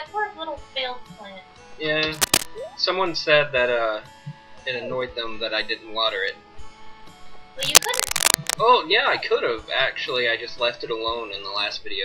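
Two bursts of cable scratch noise sit on top of the audio, one from 2.14 to 2.46 s and a longer one from 7.61 to 8.55 s, each landing a few decibels above the underlying sound. They come through as a dense, ragged scratching and rustling. The likely cause is a worn cable, connector or control being moved, so its contact resistance jumps around and spits irregular noise into the signal for as long as it's disturbed.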